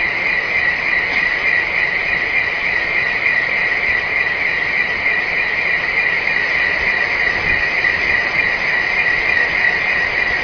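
No faults are audible anywhere in the audio.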